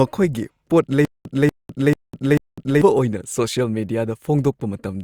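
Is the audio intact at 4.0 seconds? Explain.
Yes, the audio is intact at 4.0 seconds, with no dropout, click, distortion or other fault at that point.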